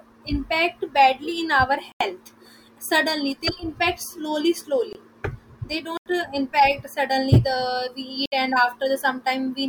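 The output buffer was not filled in time on four occasions in this speech clip, each leaving a block of digital silence: about 85 ms at 1.92 s and 5.97 s, 21 ms at 4.93 s, and 64 ms at 8.26 s, the first three lengths fitting missed buffers of 4096 and 1024 samples.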